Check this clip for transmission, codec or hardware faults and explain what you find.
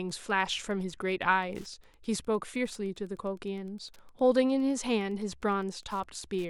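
The clip has one hardware fault, Wi-Fi interference, present for its whole length. A nearby Wi-Fi radio is coupling into the audio circuit, which rectifies its transmissions, so each beacon, sent every 102.4 ms, turns into an audible click. The result is a steady ticking at just under ten per second, about 35 dB below the speech.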